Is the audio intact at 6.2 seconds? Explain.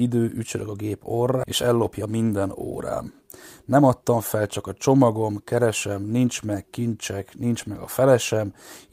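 Yes, the audio is intact at 6.2 seconds, with no audible fault at that point in the speech.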